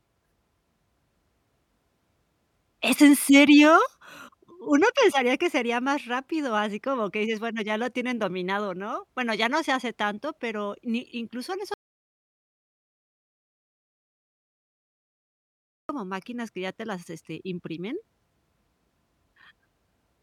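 At 11.74 s, right after "pero ni incluso en", the speech cuts off mid-phrase and the track falls to silence until 15.89 s, resuming on "máquinas que ya te". That is about 4.15 s of missing audio. This is an audio dropout to silence, likely a lost input while recording continued. Unlike a natural pause or a noise gate closing, the room tone vanishes completely and the sentence is severed rather than finished.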